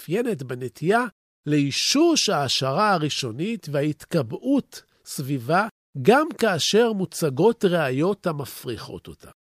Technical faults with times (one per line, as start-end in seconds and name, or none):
5.16 compressed frames skipped